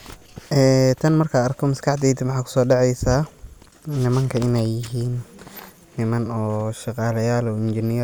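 No technical faults can be heard anywhere in the speech recording, and the signal holds steady throughout with no dropouts, distortion or other disturbances.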